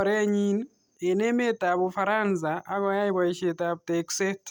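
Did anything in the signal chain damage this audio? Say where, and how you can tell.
No, nothing here damages it.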